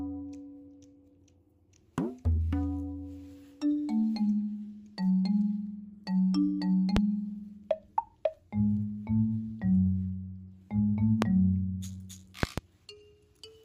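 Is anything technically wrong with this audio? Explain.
Yes, there are loud pops at 6.97–6.99 s, 11.22–11.25 s, and a double pop at 12.43–12.61 s. Each jumps well above the sound, which carries on underneath. They're likely voltage spikes from a plug, switch or static.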